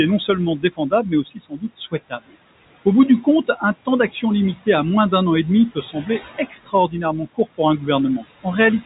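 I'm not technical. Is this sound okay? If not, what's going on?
No. Two related problems come from the noise suppressor, a filter that tries to remove background sound.

The first is noise suppressor artifacts, which run through the whole clip. The room has a steady background noise, and the suppressor keeps pushing it down and letting it back up as the speech starts and stops. That leaves a pumping background, and the speech itself can come across thin or watery.

The second is speech cut by the noise suppressor. In three stretches the filter mistakes quiet parts of the speech for background and turns them down, so soft sounds and word endings come out faint or swallowed. This happens between 0.19 and 2.34 s, affecting well under a second in total. It happens again from 3.23 to 4.23 s, between "bout du" and "limité à moins d'un", where only a brief moment is lost. The third stretch runs from 5.75 to 7.84 s, just after "d'un an et demi", where about half a second is dulled.

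The narrow, phone-like tone is expected, because this is an ordinary telephone-format recording.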